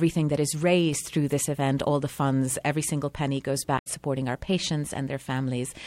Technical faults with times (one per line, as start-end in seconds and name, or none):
3.75-3.87 damaged data in a compressed stream